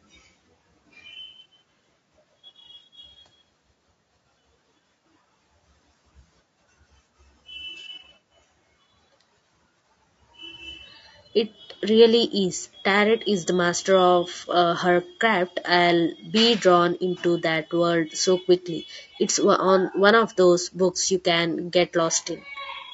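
Throughout the speech, the likely cause is low-delay AAC compression, with short frames that capture pitch harmonics poorly and spend bits inefficiently, at a rate consistent with about 32 kbps. The damage is plainly audible: the voice sounds rough and grainy.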